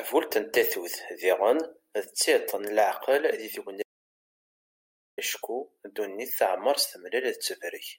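At 3.83 s the speech drops out to silence until 5.18 s, losing about 1.35 s. The input was likely interrupted while recording continued, so the waveform goes flat and the spectrogram shows a blank band, with no room tone or noise floor.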